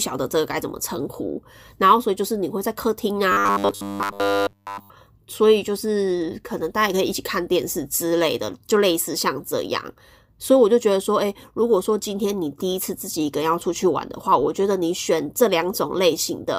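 From 3.32 to 4.90 s the speech goes robotic: a rigid, metallic buzz pitched at 100 Hz that still loosely tracks the words. That's likely repeated short buffers, with a 10 ms chunk looping in place of nearly all the real audio while fresh data failed to arrive.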